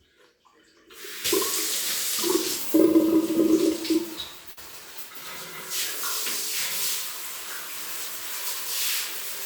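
At 4.51 s, running to 4.59 s, there is a burst of packet loss. A run of packets failed to arrive in time for playback, and the receiver filled the hole by extending the last sound it had decoded, fading it down over about 53 ms. When normal decoding resumes, about 60 ms of the original audio is gone, so the sound briefly smears into a held, decaying tail and then jumps forward past the missing section.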